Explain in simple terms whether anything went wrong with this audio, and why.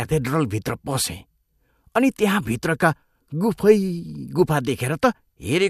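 Nothing went wrong here.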